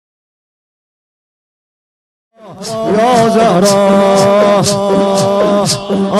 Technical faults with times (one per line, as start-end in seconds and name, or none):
none